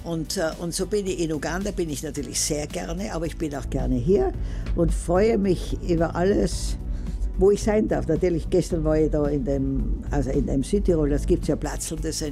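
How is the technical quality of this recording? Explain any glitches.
There's one real problem: from 3.65 to 11.65 s, de-emphasis is applied wrongly. A treble cut meant to reverse pre-emphasis hits audio that never had any, or is applied a second time, rolling off about 11 dB by 10 kHz, so everything turns dull and muffled.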